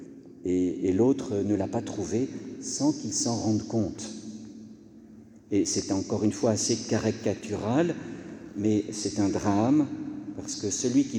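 No technical faults can be heard anywhere in the recording. The sound runs continuously, with no interruptions, glitches or level jumps at any point.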